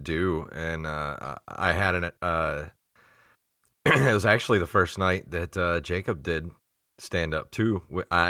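Listening through the speech recording, nothing stood out as a technical fault at any point.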